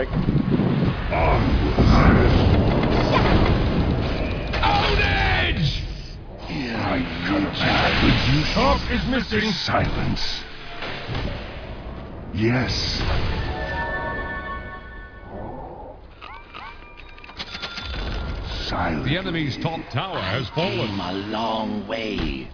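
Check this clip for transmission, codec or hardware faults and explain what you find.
No transmission, codec or hardware faults found here.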